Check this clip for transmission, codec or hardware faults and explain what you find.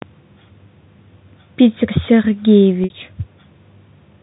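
One transmission fault is audible: packet loss with pitch repetition, from 2.84 to 2.90 s. About 60 ms of audio never arrived, which fits three 20 ms packets dropped in a row. The receiver filled the gap by repeating the last pitch period and fading that copy out over about 50 ms, so the sound briefly holds on a buzzy, slightly mechanical tone, thins toward silence, and then cross-fades back as real audio resumes. This sits on a G.711 telephone line whose band runs from about 150 Hz to 3.7 kHz.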